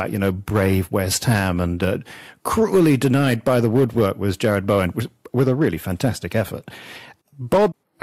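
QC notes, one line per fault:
throughout, hard clipping: the speech carries a gritty crackle that breaks out on the peaks, with a harsh edge riding the peaks while quieter passages stay cleaner. The signal is driven about 6 dB past what the stage can pass, so its peaks are sliced flat at the ceiling, and roughly 2 percent of samples end up clipped. Those squared-off tops add harmonics high in the spectrum, which is heard as the fizz on loud moments.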